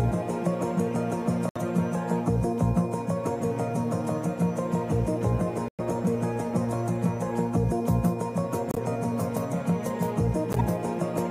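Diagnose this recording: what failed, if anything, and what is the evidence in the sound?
The codec stage failed, with a corrupt frame decoded four times. Brief chirpy noise bursts occur at 1.49–1.61, 5.68–5.80, 8.71–8.78 and 10.53–10.61 s. They peak at about -20 dBFS, rising to about -10 dBFS. Each spans a few damaged frames whose misread gains put energy at wrong frequencies.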